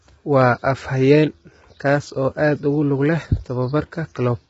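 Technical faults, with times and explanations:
Throughout, low-delay AAC compression: the speech has likely passed through AAC-ELD, the low-delay codec of video calls, at a heavily starved rate, and the damage fits about 16 kbps. Starved of bits, its coarse quantization lets noise fill the gaps between the pitch harmonics, and the voice comes out rough and grainy. Bits are saved by discarding the top band, leaving nothing above 7.7 kHz and a dulled sound.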